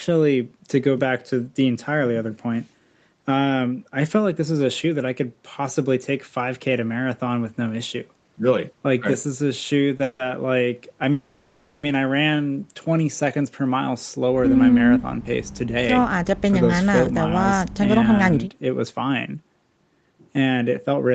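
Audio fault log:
9.97 to 10.01 s, short stall from a late packet: A packet missed its playout deadline and the jitter buffer ran dry for a moment, so the receiver extended the last stretch of sound by about 20 ms until the data turned up, then resumed exactly where it had paused. Nothing is lost. What you hear is a brief hold on the sound with a faint buzzy or slightly dipped quality, adding 20 ms of delay.
10.03 to 10.21 s and 11.12 to 11.85 s, call audio freeze: These sound like packets likely held up in transit, leaving the jitter buffer empty twice in quick succession. Each time the receiver kept generating a continuation of the last sound, first for 160 ms and then for 710 ms. That continuation is a buzzy, fading tail that never drops to full silence. Once the packets arrive, playback picks up from the stopping point, so these are inserted gaps with no audio missing. The delay grows with each one.
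14.96 to 21.14 s, jitter buffer speed-up: After the stalls the buffer was holding more audio than its target, so the receiver trimmed it back by cutting out tiny pitch-period-sized pieces over and over. That removes roughly half a second in total. The speech runs about 8 percent faster for the last six seconds while keeping its pitch, so it sounds slightly rushed rather than higher. The Opus call path's band limit at 8 kHz stays in place throughout this stretch.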